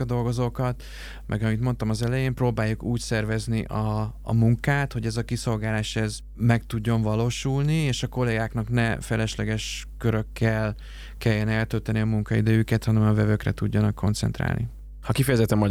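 From start to finish, mains hum sits under the speech: a steady low tone at 50 Hz with some low harmonics above it, around 15 dB below the speech level. It points to a ground loop or nearby transformer coupling the power line into the signal path. Unlike wind or handling rumble, which is broadband and fluctuates, this is a fixed pitch that never changes in level.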